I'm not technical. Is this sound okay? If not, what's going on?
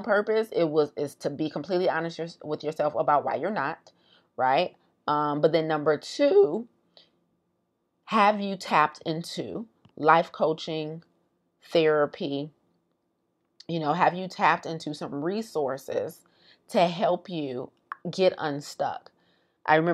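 Yes, nothing about this recording stood out as a problem when listening to it.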